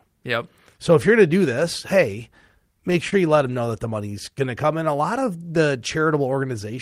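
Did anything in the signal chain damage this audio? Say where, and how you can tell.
Yes. Repeated stalls (stutter) between 2.90 and 3.67 s point to the network and jitter buffer: six brief holds, the longest 25 ms, totalling 71 ms, where the receiver extended the last sound. Nothing is lost, which separates this from packet loss dropouts.

A jitter buffer slow-down from 4.31 to 5.14 s stretches the audio by 70 ms, so it plays at about 92% speed with unchanged pitch. The receiver repeated pitch periods to rebuild its reserve. The drawn-out pacing without pitch drop distinguishes it from tape-style slowing.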